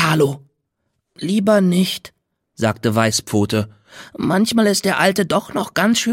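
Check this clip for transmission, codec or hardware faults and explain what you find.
There's one fault: from 3.12 to 3.90 s, a drift correction step, likely clock-matching software slowing playback 6.45%, dropping pitch 115 cents before snapping back.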